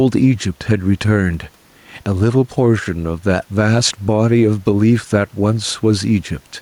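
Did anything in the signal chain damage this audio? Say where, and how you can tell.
Yes. Gain pumping throughout: input gain was likely set far too high, so a fast limiter ducks about 5 dB on each loud sound.

A DC step at the converter or input at 2.12 s: the waveform's zero line jumps and holds to the end, a low thump while speech continues unchanged.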